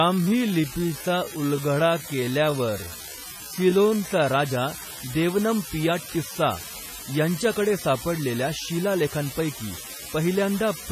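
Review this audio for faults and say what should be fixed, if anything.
A marginal data line flips one bit at random throughout, giving an unreliable data bit: equal-sized spikes that make a steady crackle and fizz, audible even in pauses.

Likely WMA compression at heavy settings zeroes weak spectral lines and smears quantisation noise, leaving ringing, washy speech with breathing hiss, and a sound that fits about 24 kbps WMA 1.

From 0.0 to 4.26 s, a time-stretched section was likely slowed to about 0.7 speed by repeating short pieces, so pace drags while pitch holds.

To prevent these, fix or replace the faulty data line, encode at a higher bitrate or use a lossless format, and leave the section at its original timing instead of stretching it.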